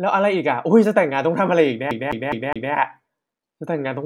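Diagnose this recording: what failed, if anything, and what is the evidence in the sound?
CD stuck on one turn at playback: the laser keeps jumping back, so a 0.21 s fragment of speech repeats four times from 1.91 to 2.73 s.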